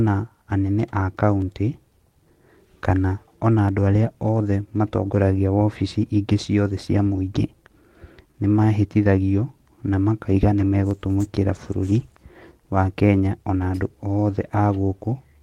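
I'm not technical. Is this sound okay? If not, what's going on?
No. There are three tiny, sharp clicks in the speech, at 1.42, 3.69 and 10.91 seconds. Each is most likely from dropped samples: a fraction of a millisecond of audio went missing, so the sound jumps abruptly, like a skip on a record.

Between 8.31 and 8.37 seconds, one sound hangs on slightly too long before the speech continues. This is a short stall from a late packet: a piece of audio arrived late, so the player stretched the last sound for about 27 ms while it waited. Nothing was lost.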